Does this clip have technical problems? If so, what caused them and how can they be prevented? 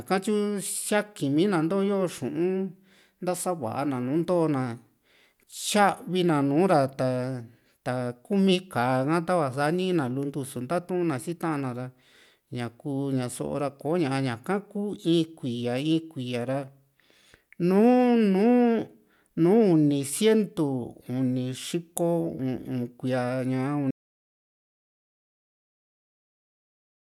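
Yes. At 23.91 s the speech stops abruptly and the rest of the clip is an audio dropout to silence, with no room tone or noise floor left. The signal is written as silence, not recorded as a quiet room. The likely cause is that the input was lost, through a disconnected device, a failed link or an accidental mute, while the recorder kept running. To prevent it, secure the connections and monitor input levels live during the recording.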